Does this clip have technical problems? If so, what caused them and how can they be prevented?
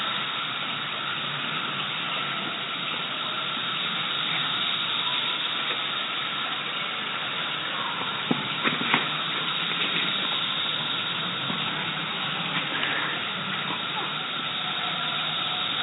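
No, nothing stood out as a technical problem on listening to this audio, so there is nothing here that needs preventing.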